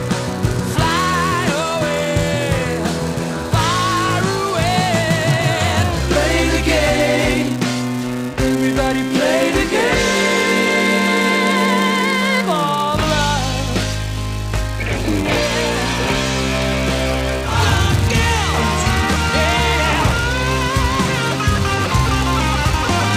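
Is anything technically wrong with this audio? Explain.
Yes. Throughout the clip there is a filter restarted on every block. The filter drops its internal state at each block boundary and starts again from silence, so every block opens with a small transient. These transients repeat at 345 Hz, which fits a 128-sample block, and they merge into a steady buzz at that pitch. The buzz rises and falls with the level of the sound, growing louder in louder passages and fading in quiet ones.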